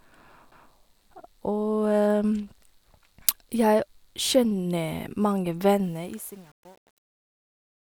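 Right at 0.51 s there's a CD skip: a tick and a brief mute of a few milliseconds, then the speech lurches on from another spot on the disc's spiral. From 5.84 s to the end, the fade-out has truncation distortion. It gets gritty from about 5.96 s, which fits a stage keeping roughly 9 bits without dither.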